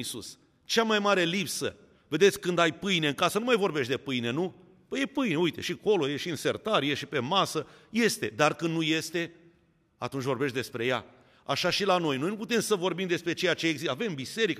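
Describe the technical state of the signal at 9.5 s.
At 9.5 s the speech signal is intact, with no audible dropout, distortion or other technical fault at that moment.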